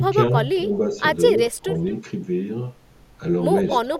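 From 0.0 to 0.15 s and 0.32 to 0.71 s, the speech dips slightly. At 1.51 to 1.67 s it drops sharply, by about 20 dB. This is speech suppressed in double talk. The echo canceller likely turned this talker down while the far side spoke. Echo leak follows at 1.75 to 1.92 s, 3.68 to 3.74 s and 3.94 to 3.99 s. Faint scraps of the voice return 225 ms late. Residual loudspeaker pickup likely escaped cancellation.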